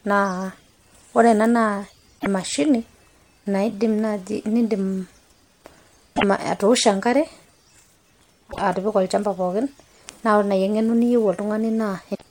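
Brief glitches of about 0.11 s break the speech at 2.16 to 2.27 s, 6.13 to 6.24 s, 8.48 to 8.60 s and 12.11 to 12.22 s. This is damaged data in a compressed stream: corrupted bytes make the decoder misread frames and lose sync until the next frame header.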